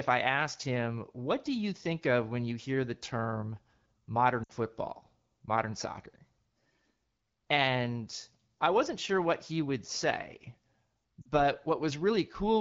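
This speech clip has lost AMR speech frames. Coded over AMR wideband (HD Voice), the speech carries only light codec colouring. At 4.43 to 4.51 s, just before "football modern soccer", the sound smears and fades briefly, which fits about three missing 20 ms frames. At 11.22 to 11.28 s a shorter warble fits two. Frames failed their checksum, so the decoder repeated its last good settings with falling gain before recovering.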